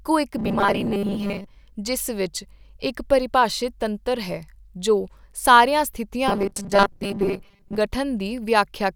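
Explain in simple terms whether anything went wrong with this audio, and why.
Audio most likely arrived too slowly, so the software kept replaying its last 5 ms to fill gaps. This robotic sound from repeated short buffers turns speech into a stiff 200 Hz buzz from 0.37 to 1.48 s, with about half repeated, and 6.28 to 7.78 s, where most is.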